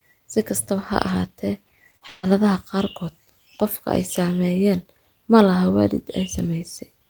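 A speech recording in which, just after "ha ahaatee", short concealed packet loss smears the sound at 1.91–1.95 s and 1.97–2.03 s, where the receiver bridged gaps of about 20 and 40 ms with extrapolated audio. On a spectrogram these show as brief blurred columns with smoothed harmonics. Then, from 2.07 to 2.25 s, there is a long network dropout, likely from a stalled network path. A fading synthetic buzz or hiss fills the whole 160 ms before "qaarkood qofka", visible as a decaying waveform stretch rather than true silence.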